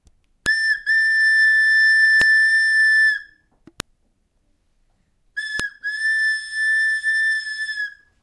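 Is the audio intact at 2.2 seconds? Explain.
No. At 2.22 s a new piece of audio was joined on without its file header being stripped, so the header bytes play as samples, a file header played as audio. The result is a single sharp, loud click that cuts across the sound.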